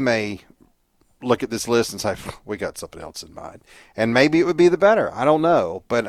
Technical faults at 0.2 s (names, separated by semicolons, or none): none